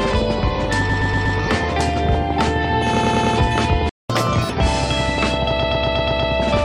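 From 0.89 to 1.37 s, repeated frames cause a stutter: a 120 ms block plays four extra times, adding 480 ms. On a spectrogram the same short pattern tiles side by side. The same fault returns at 2.95 to 3.35 s, where a 100 ms block repeats four more times, and at 5.59 to 6.31 s, where a 120 ms block recurs six extra times, adding 720 ms.

At 3.89 s the sound stops dead for 200 ms in a playback stall, likely because the player ran short of data or was blocked. The waveform shows a flat gap and the spectrogram a clean vertical blank.

From 4.10 to 4.50 s, catch-up at higher speed plays the backlog 1.5 times fast, lifting pitch by roughly seven semitones before it settles. Spectral lines shift upward and the waveform's features compress, then both return to normal.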